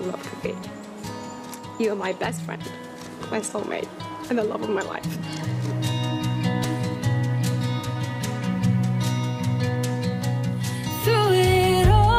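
No technical fault can be heard in the signal at any point, so there is nothing to time or trace to a cause.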